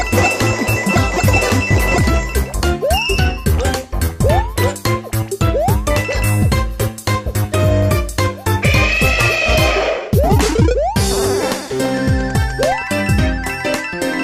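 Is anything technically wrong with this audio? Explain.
Yes, a couple of things. At 1.49 s there's a gap between stream segments: two chunks on a 2-second grid don't quite meet, so about 6 ms of hard-edged silence drops in. Then there's a DC step at 7.83 s and another at 12.72 s, where the waveform's zero line suddenly jumps and decays back through a 20 Hz high-pass. Each one lands as a low thump while the sound carries on.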